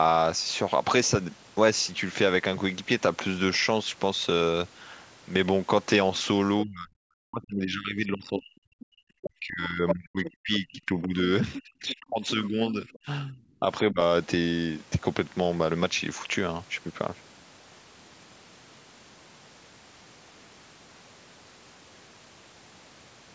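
Speech suppressed in double talk runs from 6.63 to 13.99 s. Across about five seconds of that stretch the talker's speech dips, thins out and breaks into pieces, falling at its deepest by roughly 40 dB. This is likely because both sides spoke at once: the echo canceller could not tell the local talker from the loudspeaker echo, so it pulled the whole microphone signal down.

The other side's voice leaks through inside that same stretch. Brief scraps at 8.8, 9.88 and 10.25 s each last about 60 ms. A longer piece runs from 11.53 to 11.96 s, and a short one from 12.87 to 12.99 s. Levels vary widely. The scrap at 9.88 s is about as loud as the talker. The ones at 10.25 s and 11.53 s sit roughly 15 dB below, and those at 8.8 s and 12.87 s are faint, around 25 to 30 dB down. The likely cause is the echo canceller failing to remove all of the far-end sound that the device's loudspeaker fed back into its microphone. 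The leaked voice carries the same band limit as the call path, with nothing above 8 kHz.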